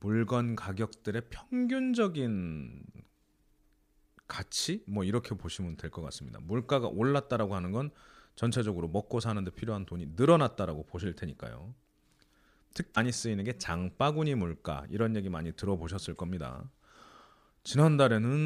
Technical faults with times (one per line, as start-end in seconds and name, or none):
12.92-12.97 damaged data in a compressed stream